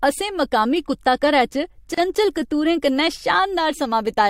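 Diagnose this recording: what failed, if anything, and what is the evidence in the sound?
The speech cuts out abruptly from 1.94 to 1.98 s, a 32 ms silence, then resumes where it left off. This is a gap at a join of encoded pieces, a codec and editing-stage fault. Each section was encoded separately, and the encoder's start-up delay and final-frame padding were never trimmed, so that silence sits between them. On a waveform it shows as a flat dropout with slightly softened edges; on a spectrogram, a thin blank vertical stripe across all frequencies.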